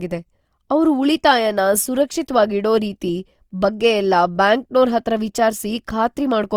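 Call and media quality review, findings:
Grainy, rough texture on speech throughout, plainly audible. Likely Opus compression at a low rate, consistent with about 24 kbps in the CELT music mode, with starved bands filled by folded or noise content. Spectrogram: full bandwidth to 20.2 kHz, few holes, harmonics smeared into noise.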